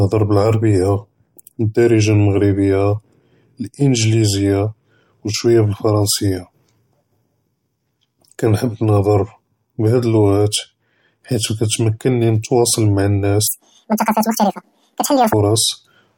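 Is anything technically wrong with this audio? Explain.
Yes. Between 13.47 and 15.33 s the audio is read two samples at a time, so it plays at double speed. The reader treats each pair of samples as a single frame, as if the stream had two channels or samples twice as wide, so it consumes the data twice as fast as intended. The speech races along at 2x and jumps an octave, 12 semitones, higher.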